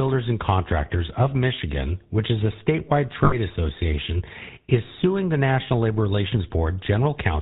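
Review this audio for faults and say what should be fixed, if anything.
The whole recording carries the GSM full-rate codec's damage, plainly audible as a buzzy, gravelly roughness. The codec rebuilds the sound from a vocal-tract filter driven by a sparse, regularly spaced pulse excitation, so fine detail is lost. The bandwidth and grain fit the 13 kbps full-rate mode. On a spectrogram, energy stops sharply at 4 kHz with nothing above, and the harmonics look smeared and grainy rather than clean. Keep the recording path at wideband or better, or transcode from an uncompressed source rather than through a GSM leg.

From 3.24 to 3.36 s, just before "association is suing the", the audio holds on a rough, metallic ring. These are lost GSM frames. Each missing frame was concealed by reusing the last good frame's parameters, so the sound freezes instead of continuing. The gap is about 80 ms, which fits four 20 ms frames. 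On a spectrogram, a flat, repeated spectral slice replaces the moving harmonics. Prevent this by fixing the transmission errors upstream, or by using a channel with error protection or retransmission.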